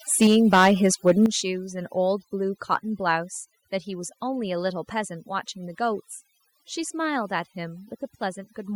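Throughout, overdone noise removal leaves near-silent gaps dotted with twinkling specks. Unlike codec artefacts, whole bands vanish rather than smear.

From 0.21 to 1.26 s, and briefly from 2.73 to 2.76 s, the loudest peaks crackle harshly. This is likely microphone overload, about 8 dB and then about 1 dB past the converter's limit, affecting only the peaks.

At 0.27 s and 1.26 s, speech and background drop together in single steps of about 4 dB and about 9 dB. This is likely the microphone volume being stepped down. Unlike a compressor, the level stays down without pumping back.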